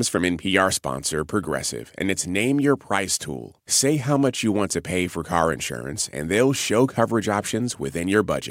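Nothing stood out as a technical fault on listening to this speech recording.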